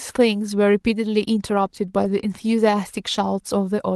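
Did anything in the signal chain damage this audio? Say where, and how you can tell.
Yes, a lost packet rebuilt from error correction at the network stage. Around 2.03 to 2.05 s there's no gap, but a 20 ms stretch turns rougher and noisier, which points to one dropped packet. The decoder filled it with the low-bitrate backup copy carried in the next packet.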